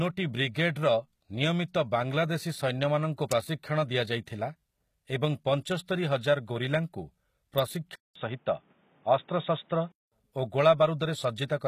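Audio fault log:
Throughout: HE-AAC compression. The codec damage is plainly audible, and nothing is present above 14.9 kHz. The upper band is not the original signal. It is rebuilt from copies of lower bands, shaped by a coarse envelope, so its harmonics do not line up with those below the crossover. This is likely a low-rate HE-AAC encode, consistent with about 20 kbps. Plain AAC at that rate would cut the treble much lower, so the extended but synthetic top end points to band replication.
3.31 and 7.59 s: electrical switching spike. Each is a sharp snap lasting at most about 5 ms, sitting on top of the speech rather than interrupting it. The likely cause is a nearby switch, motor or static discharge arcing into the audio line. Codec artefacts or dropouts would remove or smear the sound instead. These spikes are isolated transients that add a click and leave the surrounding audio intact.
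7.95 to 10.12 s: input switched to a poorer device. A silence of 200 ms falls at the changeover, and then the speech loses everything above 3.8 kHz and turns dull and boxy. Loudness stays roughly the same, and a new background noise appears around 40 dB below the speech. At 10.12 s the sound clears again. The likely cause is the recording moving to a narrower-band input and back. A filter alone would not bring a gap or its own noise floor.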